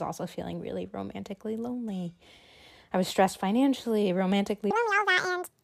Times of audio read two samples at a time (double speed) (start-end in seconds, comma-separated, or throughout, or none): 4.71-5.63